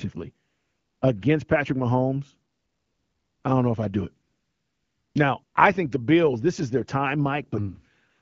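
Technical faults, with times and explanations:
0.47–1.01 s, 2.51–3.43 s (just before "I don't know if"), 4.27–5.15 s (just after "if I do it"), 5.43–5.55 s (before "I think the") and 8.09 s to the end: AMR comfort noise. The phone judged these pauses silent and stopped sending speech frames, so the receiver substituted a smooth synthetic hiss that switches abruptly in and out where the real background was.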